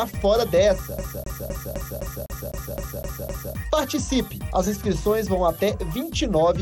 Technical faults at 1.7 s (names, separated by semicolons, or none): CD stuck on one turn